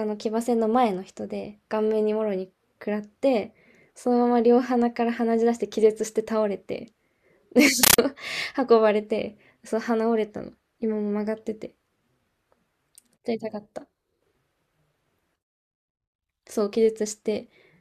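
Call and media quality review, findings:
Loud chattering static replacing speech, 7.83–7.98 s. Compressed stream played as audio: undecoded Dolby Digital bursts, 13.3 ms each at 31.25 Hz, consistent with 640 kbps AC-3 passthrough.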